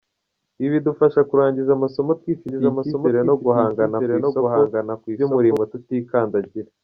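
Speech recording with a doubled audio track from 2.49 s to 5.57 s: a dry, full-band copy trails the original by about one second, roughly 5 dB quieter, and starts and stops abruptly, likely from a slower second capture path mixed back in.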